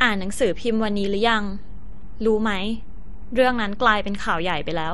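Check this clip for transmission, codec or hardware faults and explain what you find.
One fault runs through the whole speech clip: a DC offset. It cannot be heard as a sound of its own. Instead, a constant shift moves the entire waveform off zero, which uses up headroom and leaves steady energy at the very bottom of the spectrum.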